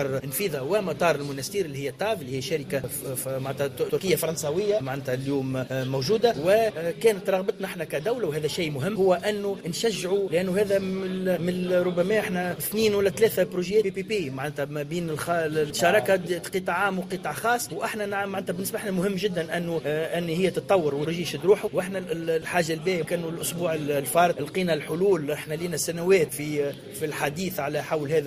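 No technical faults can be heard anywhere in the recording. Nothing in the sound calls for comment.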